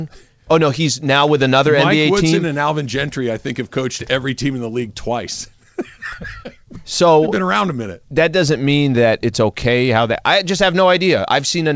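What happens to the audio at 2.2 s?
Nothing goes wrong at 2.2 s: the speech there comes through intact, carried over the WebRTC call path with its G.722 coding, which leaves nothing above 8 kHz.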